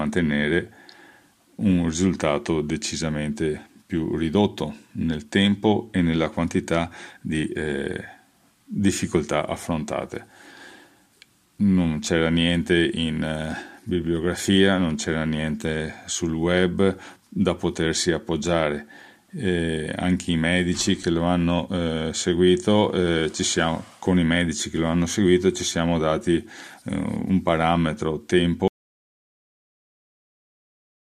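At 28.68 s the sound cuts to silence through to the end, with no room tone: an audio dropout to silence, likely a lost input, not a fade-out.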